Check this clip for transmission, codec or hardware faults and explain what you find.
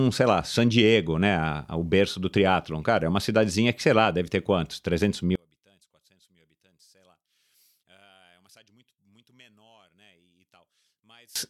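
One fault is present, from 5.36 s to 11.36 s. There the speech nearly vanishes when heard in mono, falling by about 36 dB to a faint residue with its centred body gone. The likely cause is one channel inverted: with one stereo channel's polarity reversed, the material common to both channels cancels on summing, and only the small difference between them survives.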